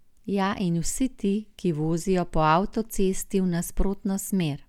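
No technical faults are audible anywhere in the recording.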